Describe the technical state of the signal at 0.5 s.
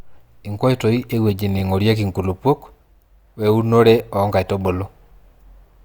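The speech at 0.5 s is intact, with no fault present at that moment.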